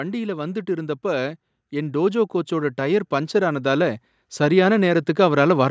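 From 0.41 s to 5.66 s the level climbs steadily, a case of automatic gain rising. The gain control judged the incoming speech too quiet and kept pushing its gain up, by about 10 dB over those five seconds. Because the gain acts on the whole signal, the room noise lifts in step with the voice, so the background swells along with it rather than the speech alone getting louder. The call microphone processing shows as content stopping at 8 kHz.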